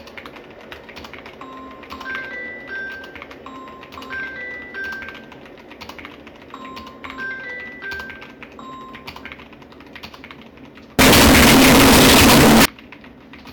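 From 10.99 to 12.65 s, 32-bit float samples were likely read as 32-bit integers, a float read as integer fault, turning the audio into a harsh, near-square blast at an almost fixed, high level.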